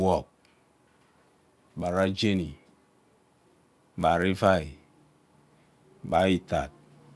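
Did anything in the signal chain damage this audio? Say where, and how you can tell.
Yes. The sample-rate conversion stage was damaged by a resampler restarted on every block. A 100 Hz buzz runs through the whole clip, but only under the speech. The converter, going from 48 kHz to 24 kHz, treated each 10 ms block in isolation. Each block edge therefore carries a small error.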